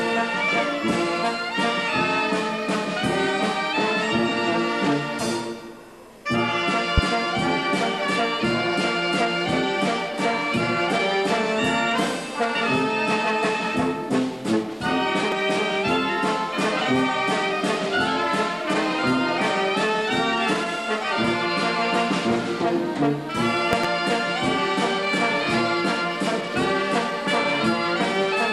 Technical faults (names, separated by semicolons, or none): loud pop